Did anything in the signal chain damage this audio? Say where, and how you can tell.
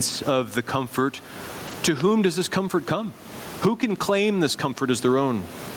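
Yes. Gain pumping runs throughout, likely from input gain set far too high with a fast limiter. The gain swings roughly 20 dB, pulling loud and soft parts closer in level.

Two lost packets were rebuilt from error correction at 1.67 to 1.73 s. This is a network fault. About 40 ms sounds rough and noisy, consistent with two lost packets decoded from low-bitrate copies.

Two loud pops sit on top of the speech, at 2.00 to 2.02 s and 4.78 to 4.80 s. They peak around 15 and 10 dB above the signal, likely voltage spikes in the analogue wiring.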